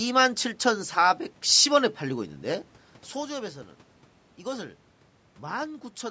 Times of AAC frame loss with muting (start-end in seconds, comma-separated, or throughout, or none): none